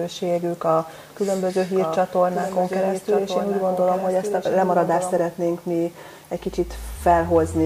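From 1.75 s to 5.19 s the sound is doubled: a second full-band copy runs about a second behind, around 5 dB quieter, with no decay or room colour. It cuts in and out abruptly at those edges. This doubled audio track likely comes from a second, slower capture path being mixed in. A spectrogram shows the same patterns repeated a second later and fainter, and the waveform thickens sharply over that span.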